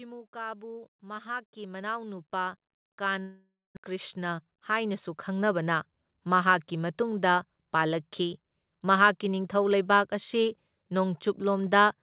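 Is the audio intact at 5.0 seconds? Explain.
No. At 5.0 s two faults overlap. The first is automatic gain rising, which runs from 0.32 s to about 5.70 s. The gain control judged the input too quiet and kept raising its gain, about 20 dB in total across that stretch. The speech and the background noise floor therefore swell together, so at 5.0 s both are heard climbing steadily in level rather than staying constant.

The second is a jitter buffer speed-up, which runs from 3.89 s to 5.53 s. The receiver's buffer had built up more audio than its target, so it trimmed short pitch-period-length pieces many times in succession. Roughly 150 ms is removed in total, and playback runs at about 108% speed over that span. At 5.0 s the speech sounds hurried and compressed in timing, while its pitch stays unchanged.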